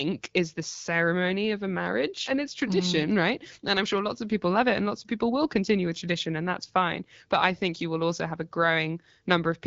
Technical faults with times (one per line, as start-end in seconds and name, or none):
none